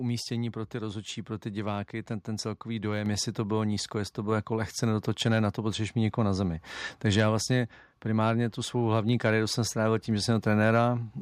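At 3.06 s, between "diváky ten ten celkový" and "jestli to bylo nízko", the microphone volume is stepped up: the input gain rises by about 4 dB in a single jump, as if the calling software judged the microphone too quiet and raised it. The speech and the background noise become louder together at that instant. On a waveform the envelope widens abruptly and stays wider. On a spectrogram every frequency band brightens at once, in a clean vertical edge.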